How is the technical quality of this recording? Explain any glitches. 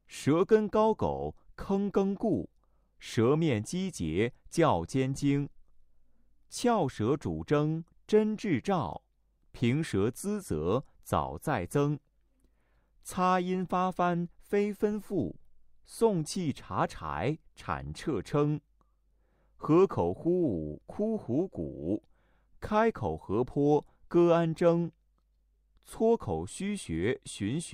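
Nothing stood out on listening; no glitches could be heard anywhere in the recording.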